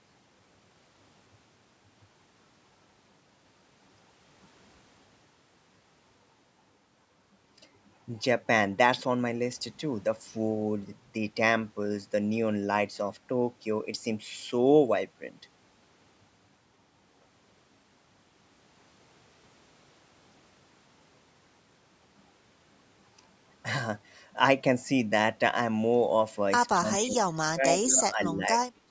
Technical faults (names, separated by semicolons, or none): speech suppressed in double talk; echo leak